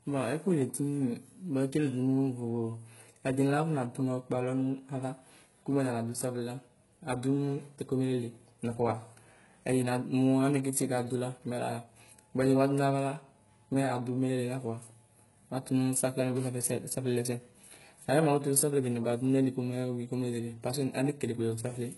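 Throughout the speech, the treble is present up to a hard ceiling near 11.5 kHz but sounds synthetic: s sounds come out gritty and lispy. That points to HE-AAC compression, likely at a very low bitrate around 12 kbps, rebuilding upper bands by copying lower ones. Plain low-pass filtering would simply dull the top instead.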